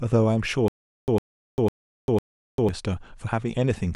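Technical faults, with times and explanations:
0.68 to 2.69 s, stutter with silent gaps: a roughly 104 ms scrap of speech plays four times, each followed by about 397 ms of dead digital silence, so it pulses every half second. Likely a stalled stream replaying its last fragment, and the audio from that stretch is simply gone.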